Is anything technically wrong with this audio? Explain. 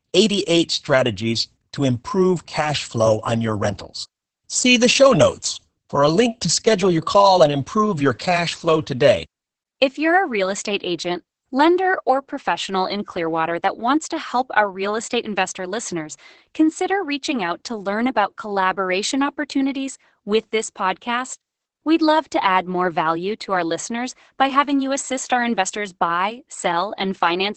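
Yes. Throughout, the speech carries heavy Opus voice compression: the linear-prediction SILK coder keeps only content below about 8 kHz and codes the excitation coarsely, which fits roughly 10 kbps. Voices sound muffled, hoarse and faintly robotic. A simple low-pass filter would muffle without that grainy, synthetic buzz.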